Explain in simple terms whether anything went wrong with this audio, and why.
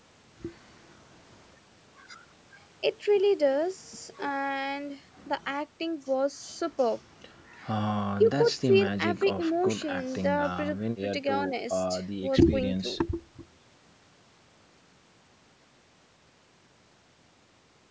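Nothing went wrong; it's ordinary call-microphone speech.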